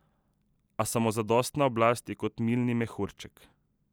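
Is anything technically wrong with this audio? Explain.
Yes. At 2.84 s the speech has a single sharp click, likely from dropped samples: a fraction of a millisecond of the stream is missing, so the waveform jumps straight to a later value. Unlike a dropout, no sound audibly vanishes. There is just one instant click, a thin vertical line across the spectrum.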